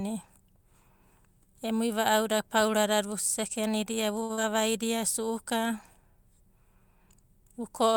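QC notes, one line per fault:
4.23–4.31 s, short stall from a late packet: Just after "pauradada vusekenidia vu", the sound holds for about 58 ms while playback waits. Nothing is lost, but timing slips later.
4.33–4.47 s, short concealed packet loss: About 40 ms never arrived. The receiver extended the preceding sound to cover it, leaving a brief smear before real audio resumes.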